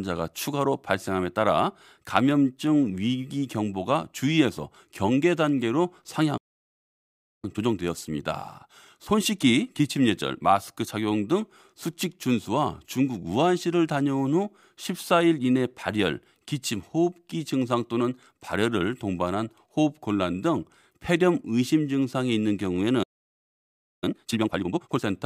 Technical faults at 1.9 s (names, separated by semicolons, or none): none